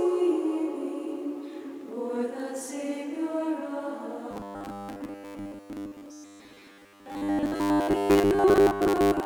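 Robotic sound from repeated short buffers runs from 4.31 s to the end. A fixed 100 Hz buzz sets in, most likely because new audio arrived too seldom and about 10 ms chunks were replayed in place of most of the sound, leaving it rigid and metallic.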